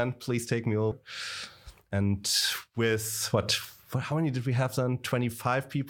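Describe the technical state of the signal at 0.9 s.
At 0.91 to 0.94 s, compressed frames are skipped. The decoder never plays a run of coded frames, so the audio leaps forward by roughly 200 ms, which fits about ten 20 ms frames. In a lossy codec, overlapping neighbours smear the join into a short blip; lossless frames meet with a hard click.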